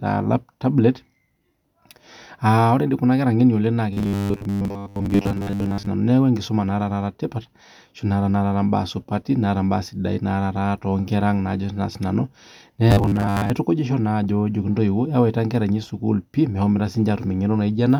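Right after "kunakera ng'eno oleng naa", from 3.93 to 5.87 s, the speech collapses into a rigid metallic buzz pitched at 100 Hz, and it does it again from 12.91 to 13.50 s. That's robotic sound from repeated short buffers: audio likely arrived too slowly, so the same 10 ms chunk got looped to fill the gaps, with most of the real signal dropped. The sound follows the original speech only roughly under that fixed drone.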